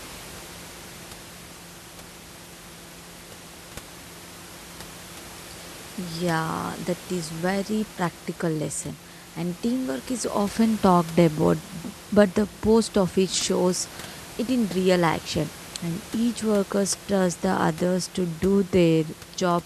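The speech signal is intact, with no dropouts, distortion or other technical faults at any point, and only the room's own background noise sits underneath it at about 18 dB below the speech.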